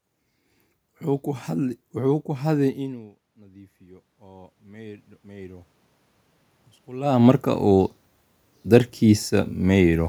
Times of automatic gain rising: 2.73-5.73

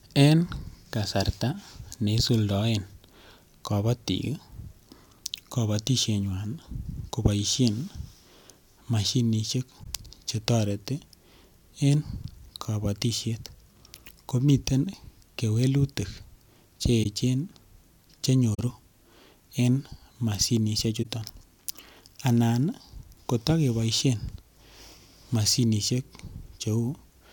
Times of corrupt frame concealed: 9.83-9.86, 17.03-17.06, 18.54-18.60, 21.02-21.06

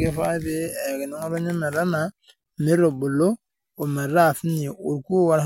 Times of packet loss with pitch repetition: none

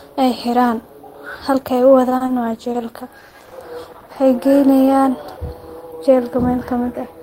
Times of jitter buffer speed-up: 5.97-6.53

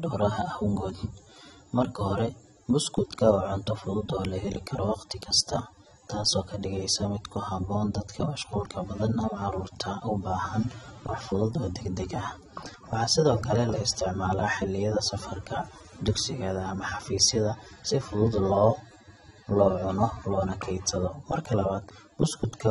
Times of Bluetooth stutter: none

